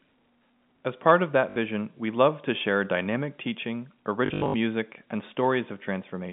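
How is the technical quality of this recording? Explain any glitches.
Two short stutters are the main problem, both packet loss with the last packet repeated, heard over a telephone-style G.711 line that carries roughly 150 Hz to 3.6 kHz.

At 1.50 to 1.56 s, right after "part of", 60 ms dropped out, and the receiver looped the last packet to fill the gap. The loops don't line up with the pitch, so you get a quick, robotic stutter. From 4.26 to 4.54 s, after "to share dynamic teaching", 200 ms goes missing, scattered over 280 ms with runs up to 80 ms. That makes a longer, choppier buzz, which fits 20 ms packets repeating at 50 Hz.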